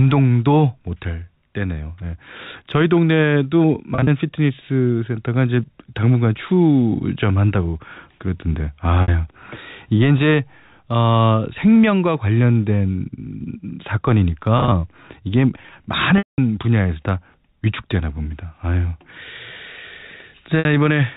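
Brief buzzy, held-note smears at 3.95, 9.02, 14.58 and 20.59 s, and a longer one fading to silence at 16.18 to 16.38 s, are packet loss with pitch repetition, where the receiver replays the last pitch period to cover lost audio.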